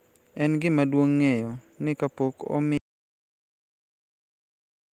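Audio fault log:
2.77 s to the end: audio dropout to silence. Right after "ni kapok" the speech stops abruptly mid-flow and does not return; the remaining two seconds or so are silent, with no room tone or noise floor underneath. That silence suggests the input signal was lost while recording continued writing empty samples, likely from a disconnected device, a failed link or an accidental mute. Whatever followed is unrecoverable. Before the cut, the full-band Opus coding adds only light damage of its own.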